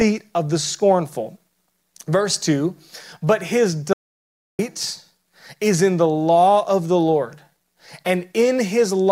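At 3.93 s the speech stops dead for 0.66 s, an audio dropout to silence, likely a lost input; the waveform flatlines and the spectrogram goes blank until 4.59 s.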